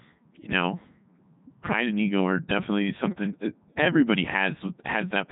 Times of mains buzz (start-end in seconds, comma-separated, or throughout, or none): none